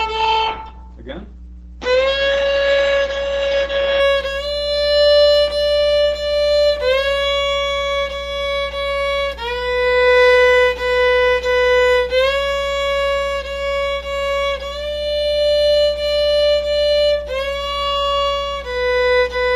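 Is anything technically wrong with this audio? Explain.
Yes. An adaptive stream starting at a low bitrate runs from 0.0 to 4.0 s: the player begins on a cheap encoding to start quickly, so nothing sounds above 8.8 kHz and artefacts are stronger, then it jumps to a better Opus 64 kbit/s version without a gap.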